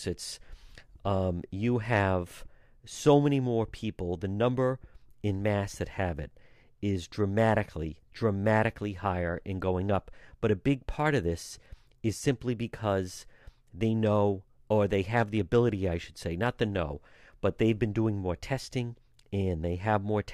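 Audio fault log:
No faults detected in the speech recording.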